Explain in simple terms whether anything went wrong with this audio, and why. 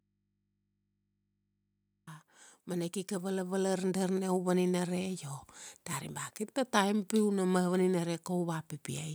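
Something did go wrong: an automatic gain rising fault between 2.68 and 5.31 s. The recording's automatic level control judged the input too quiet and slowly turned up its amplification over those two and a half seconds. Because it raises everything at once, the speech and the background noise both swell louder together, settling at a clearly higher level by the time "dari ba kir" is heard.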